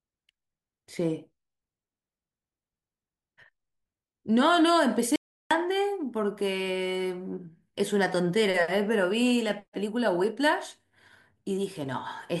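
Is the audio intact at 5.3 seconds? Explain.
No. The input was likely lost while zeros kept being recorded, an audio dropout to silence from 5.16 to 5.51 s; the speech falls to dead silence.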